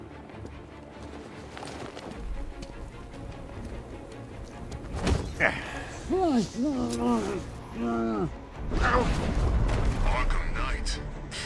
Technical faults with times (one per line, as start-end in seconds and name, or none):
none